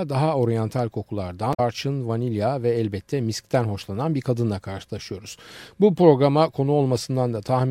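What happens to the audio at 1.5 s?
From 1.50 to 1.60 s the speech breaks into a short chirp or squawk caused by damaged data in a compressed stream: corrupted bytes make the decoder misread frames, lose sync and hunt for the next header.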